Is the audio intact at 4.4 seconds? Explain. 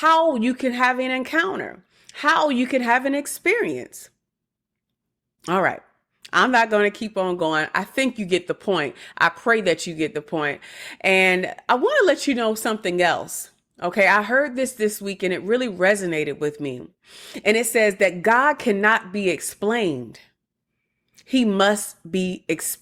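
Yes, the audio is intact at 4.4 seconds, with no dropout, click, distortion or other fault at that point.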